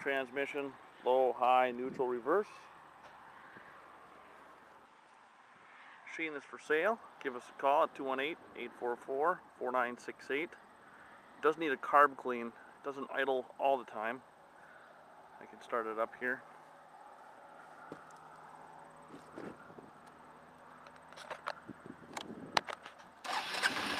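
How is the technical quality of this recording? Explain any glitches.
There's one clear glitch, a short stretch where the sound changes character. From 4.86 to 6.66 s, the top end disappears above about 10.1 kHz, the level drops by roughly 5 dB, and a faint new noise floor sits well below the signal. It all snaps back at the end. No gap marks the changeover. The likely cause is an input switched to a poorer device mid-recording, a narrower-band mic with its own gain and background noise.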